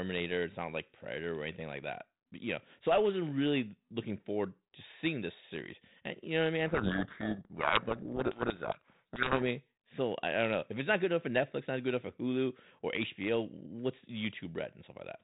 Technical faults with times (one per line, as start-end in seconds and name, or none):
6.66-9.45 codec payload misread